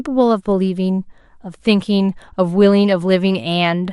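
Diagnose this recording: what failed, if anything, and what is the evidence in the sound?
MP2 compression damage runs through the whole speech recording, at the codec stage. The sound is dull, with the top end missing or fluttering in and out, and a gurgling, granular roughness is plainly audible on the voice. This is likely MPEG Layer II coding starved of bits, which fits a rate of about 80 kbps. The encoder divides the spectrum into 32 sub-bands, switches off upper bands it cannot afford, and coarsely quantises the rest.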